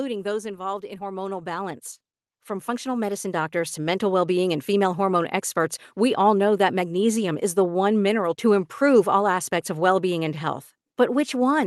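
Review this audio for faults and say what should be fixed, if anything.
Automatic gain rising at 0.79 to 1.89 s (about 6 dB) and 2.46 to 4.06 s (about 7 dB, ending just before "well being and female"): the gain control judged the input too quiet and pushed it up over roughly a second, so voice and background swell together. To prevent it, fix the input level at the source and slow or cap the gain control, or turn it off, so it doesn't chase the signal mid-phrase.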